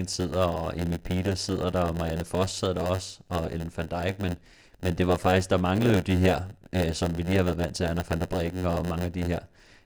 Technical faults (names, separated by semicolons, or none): block size mismatch (padded)